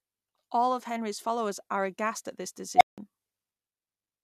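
At 2.76 s a recursive filter goes unstable: bad coefficients make its feedback grow instead of decay. A tone around 700 Hz swells to clipping within 51 ms, then numeric overflow cuts the speech to silence for 171 ms, ending at 2.98 s.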